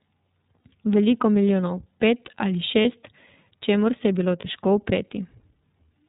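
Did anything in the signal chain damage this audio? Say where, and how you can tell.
Yes, the damage is at the codec stage. The whole clip is band-limited with nothing above 4 kHz, and the speech has that slightly rough, synthetic edge. That's the iLBC codec coding each frame's excitation independently, and the sound fits its 30 ms, 13.33 kbps mode.

The network also dropped packets, giving lost iLBC frames at 0.6, 2.82 and 4.4 s, each about 30 ms. At each one you hear a brief held, buzzy vowel where the decoder repeats the last pitch cycle with noise, and then the speech snaps straight back.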